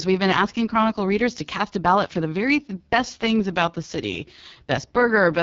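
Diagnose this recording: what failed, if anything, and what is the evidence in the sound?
The codec stage failed: the speech went through the AMR wideband (HD Voice) codec at what sounds like its lowest mode, about 6.6 kbit/s. From start to finish the voice is rough and raspy, with nothing above 7.3 kHz, because the model-based coder starves at that rate.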